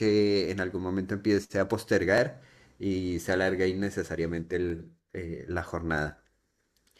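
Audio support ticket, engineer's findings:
Short stutters at 2.18–2.20 s and 4.70–4.72 s, about 2.5 s apart. Overlapping chunks: the chunking stage starts each block 23 ms before the previous one ends, so about 23 ms of audio replays at each join.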